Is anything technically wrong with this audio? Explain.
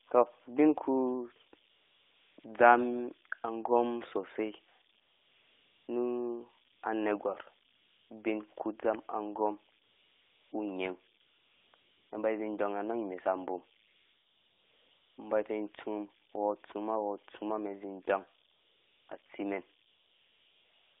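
Yes, two faults can be heard in this speech clip.

Converter idle tones run through the whole recording. With no dither, the delta-sigma converter settles into repeating bit patterns whenever its input is small, and those cycles produce a faint whistle somewhere around 5 kHz, about 28 dB below the signal. It is most exposed in pauses and adds a grainy edge under quiet passages. On a spectrogram it shows as a thin, persistent horizontal line near 5 kHz, separate from the speech energy.

AMR comfort noise replaces the real background in eleven stretches between 1.70 s and the end at 21.0 s. They range from brief 40 to 60 ms blips at 2.40 s and 6.76 s to long fills at 13.88–15.18 s (1.3 s) and 19.88–21.0 s. In each, the phone judged the talker silent and stopped sending speech frames, so the receiver generated smooth synthetic noise from a rough level and spectrum estimate. It sounds like a steady hiss switching in and out. 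A spectrogram shows flat, featureless blocks with abrupt edges.

The AMR narrowband mobile codec itself is working as expected, with its limited 300 Hz to 3.6 kHz line band and only light coding damage, which fits the 12.2 kbps mode.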